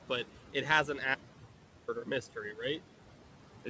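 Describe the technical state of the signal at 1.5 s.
At 1.5 s the signal is in an audio dropout to silence from 1.15 to 1.88 s: about 0.73 s of silence with no room tone, likely from lost input. The noise suppressor artifacts also apply here, with steady noise pulled down by about 11 dB frame by frame so that it sinks in pauses and rises again under speech.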